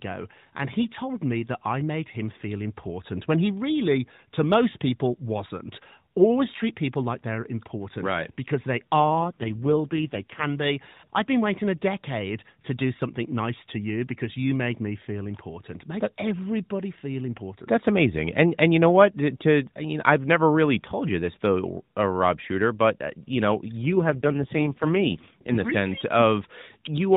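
At 9.00 s and again at 23.86 s the link weakens and the network forces an AMR rate drop. The codec steps down from its normal mode to one that fits about 4.75 kbps, spending the freed bits on error protection. Over 9.00 to 10.45 s and 23.86 to 25.72 s the speech keeps its narrowband width with no gap, but turns rougher, buzzier and more synthetic, clearing once the higher rate returns.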